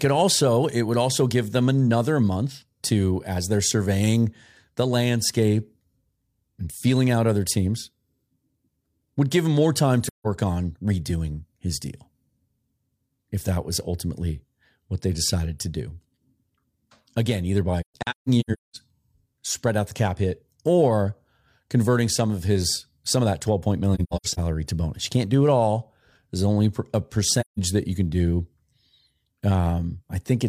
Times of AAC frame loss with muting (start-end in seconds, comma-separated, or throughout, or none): 10.06-10.27, 17.81-18.76, 23.94-24.39, 27.40-27.58